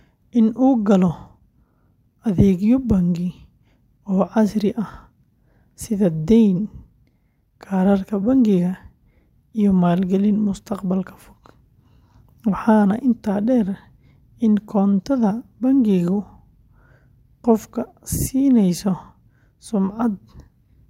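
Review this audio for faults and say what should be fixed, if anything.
No faults turned up in this speech audio, so nothing needs to be fixed.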